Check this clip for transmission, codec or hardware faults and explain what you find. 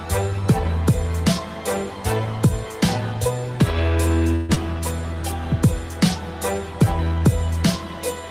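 Two faults are audible.

From 4.35 to 4.58 s there is a long network dropout, likely the cause of what is heard. Fresh audio stops. The receiver stretches the last sound into a fading buzz for about 0.2 s. Sound resumes about 0.1 s further on, and the delay shifts by about 40 ms.

From 6.85 to 7.20 s a jitter buffer slow-down occurs. The receiver repeats short pitch periods to rebuild its reserve, adding 58 ms. Playback drops to 86% speed at unchanged pitch. Sounds drag out.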